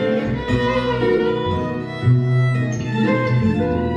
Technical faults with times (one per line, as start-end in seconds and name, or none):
1.17-1.20 corrupt frame concealed
2.77-2.85 corrupt frame concealed